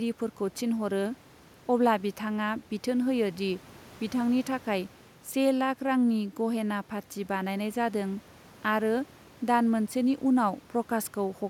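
A speech recording, and nothing is technically wrong with it.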